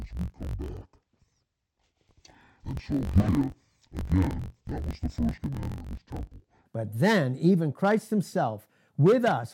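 From 0 to 6.68 s the speech sounds an octave low, doubled and choppy: interleaved audio read as planar, splitting each roughly 21 ms block, consistent with 1024 samples, into half-speed halves.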